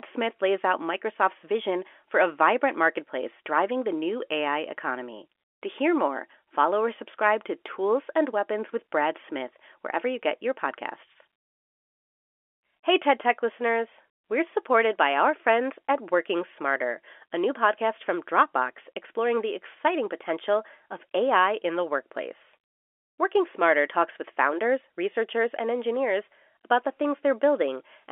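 The speech carries no technical faults; it sits within a telephone line band of roughly 300 Hz to 3.4 kHz, as G.711 mu-law telephone coding at 64 kbps gives, with that coding working as intended.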